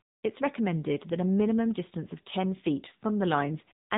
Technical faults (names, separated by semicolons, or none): AMR narrowband mobile codec